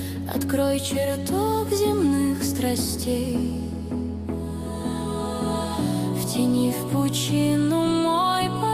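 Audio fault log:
No faults can be heard anywhere in the clip. There is nothing here that calls for an entry of its own.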